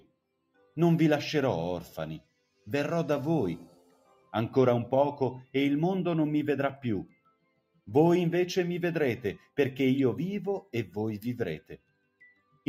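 Right from the start there's a noise suppressor applied to music or sounds, a speech-tuned one left running, so it keeps mistaking sustained material for noise and pulling it down. Level swings by roughly 10 dB across the clip, giving a pumping, thinned character.

On top of that you get spots of sound cut by the noise suppressor: at 0.0 to 0.18 s, 0.41 to 0.76 s, 2.21 to 2.67 s, 3.68 to 4.33 s, 7.05 to 7.89 s, 9.38 to 9.58 s, 10.61 to 10.96 s, and 11.58 s through to the end. Each time, held or decaying sound sinks, by about 13 to 19 dB at worst.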